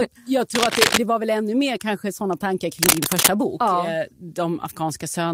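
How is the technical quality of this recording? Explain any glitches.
Two brief glitches spoil the speech. Cable scratch noise hits at 0.54–0.99 s and 2.79–3.29 s. A worn connector likely shifted, so its contact flickered. Scratching rises about 5 dB above the speech.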